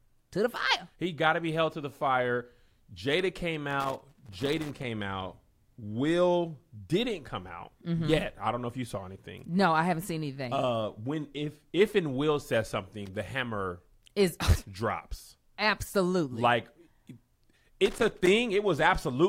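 At 3.70 to 4.84 s, 13.06 to 13.16 s (just before "hammer is") and 17.86 to 18.27 s, the speech is broken by loose connector crackle: a worn contact keeps making and breaking, chopping the signal and adding pops from any DC on the line. It sounds like irregular scratching bursts. A waveform shows ragged dropouts and sharp spikes, and a spectrogram shows scattered vertical broadband streaks across those spans.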